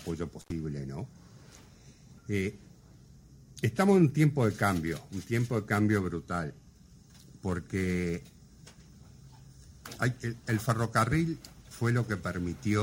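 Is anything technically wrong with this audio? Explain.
Yes. Intermittent contact from 0.41 to 0.52 s: a loose connection opens for about 73 ms, dropping the sound to faint hiss with crackle at each edge.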